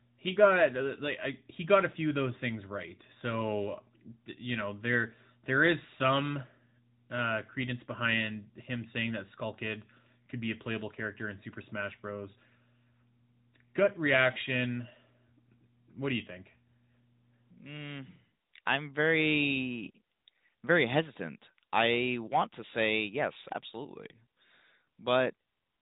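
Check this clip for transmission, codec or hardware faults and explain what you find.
One fault spans the whole clip: AMR narrowband mobile codec damage. The speech was rebuilt from a vocal-tract model in 20 ms frames at a rate that fits a 10.2 kbps mode, so it sounds plainly buzzy and synthetic. A spectrogram shows nothing above 3.8 kHz.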